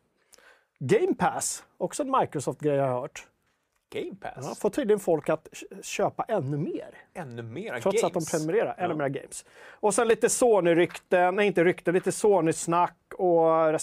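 Three sharp single clicks turn up in the speech, at 1.08, 3.92 and 10.10 s, each a thin vertical line on the spectrum. They're likely dropped samples, with a tiny fraction of a millisecond missing so the waveform jumps straight to a later value, too short to lose any sound.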